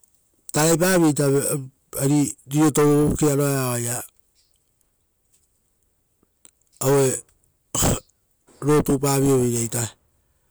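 Listening closely to this speech recording, nothing stood out as a technical problem at any point.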